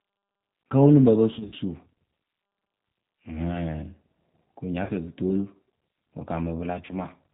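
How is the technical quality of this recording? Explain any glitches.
The recording has plainly audible damage throughout and three brief dropouts. G.729 codec, throughout: the speech is rebuilt from a vocal tract model and a few pulses per frame, which fits 8 kbit/s coding, so it sounds rough and synthetic with nothing above 4 kHz. VoIP packet loss concealed by the speech codec occurs at 1.34–1.54 s after "wǝ lǝŋ pǝ pǝ", at 4.84–4.91 s before "fɛɛ pɨ toolu", and at 6.86–6.93 s. The decoder stretches the last pitch and filter over the missing audio, about 120 ms, 50 ms and 30 ms, so the sound turns briefly into a buzzy tone or coloured noise that fades.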